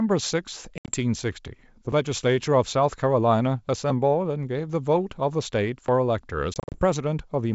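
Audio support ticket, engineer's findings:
Packet loss on an ADPCM call, 0.78–0.92 s and 6.54–6.82 s. Hard-edged silent holes, 90 ms lost across about 100 ms (longest run 70 ms), then 130 ms across 200 ms (longest 40 ms). Fits roughly ten and fifteen lost packets. Predictor and step size desync, so the audio returns slightly distorted. Unlike chunk gaps, these leave true silence.

Audio missing between chunks, 1.92 s and 5.88 s. Short skips of about 20 ms, joined with no silence and no level recovery afterward. Likely a recorder working in 2 s chunks and dropping audio at the handover. The G.722 path at 64 kbit/s sounds clean across both joins.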